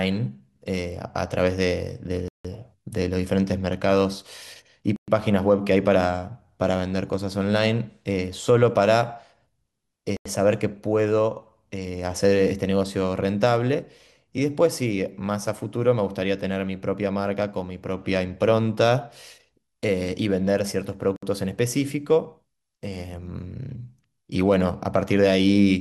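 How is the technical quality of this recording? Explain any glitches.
The speech has four brief dropouts. At 2.28 s (164 ms), 4.96 s (116 ms), 10.17 s (89 ms) and 21.16 s (63 ms), the sound cuts to silence and then resumes. These are likely Bluetooth stalls, where interference delayed packets, the headphone buffer ran empty, and playback paused until resent packets arrived.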